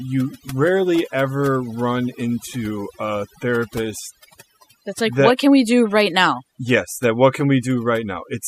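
Throughout the speech, overdone noise removal leaves near-silent gaps scattered with twinkling specks. On a spectrogram, isolated bins blink on and off against black.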